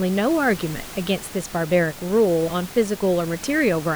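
No technical faults can be heard anywhere in the speech. Some background noise from the room sits about 17 dB below the voice, and it belongs to the recording space rather than to the system.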